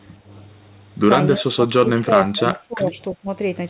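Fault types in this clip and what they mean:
Speech suppressed in double talk: the speech sinks in patches by about 25 dB at worst, likely from echo-canceller ducking rather than abrupt, clean packet-loss gaps.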